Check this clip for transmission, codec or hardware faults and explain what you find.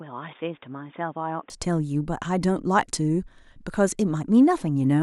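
One fault: an input switched to a poorer device during the first 1.5 s of the speech. From 0.0 s the audio stops at 3.6 kHz and sits a few decibels quieter, with a faint added noise floor well below the speech. At 1.5 s it opens up to full bandwidth with no gap, likely because the system changed from a narrowband microphone or headset call profile to the main input. On a spectrogram, energy ends flat at 3.6 kHz, then extends upward; the waveform steps up slightly in level.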